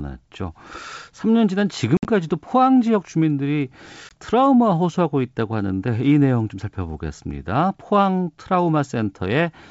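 Packet loss on the ADPCM call leaves hard silent gaps at 1.97–2.06 s (70 ms, longest 60 ms) and 4.09–4.12 s (20 ms). Each resumes slightly distorted while the decoder's predictor and step size resync.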